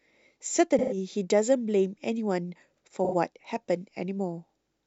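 A speech clip with AAC frame loss and concealment at 0.78–0.97 s and 3.04–3.14 s. Each gap is filled with smeared, phasey noise. A spectrogram shows blurred, stretched frames, and the waveform shows a fuzzy envelope, which fits about three and then two lost frames.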